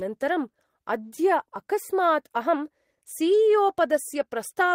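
At 1.15 to 1.21 s, a short stall from a late packet holds the speech about 26 ms; the spectrogram shows frozen, smeared harmonics, then resumes intact.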